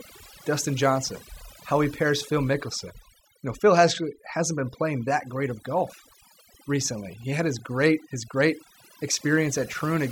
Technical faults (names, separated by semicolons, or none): overdone noise removal